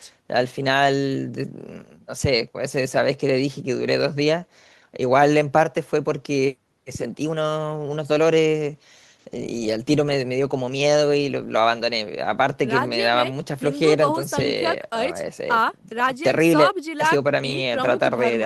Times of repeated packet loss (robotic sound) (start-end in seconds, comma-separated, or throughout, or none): none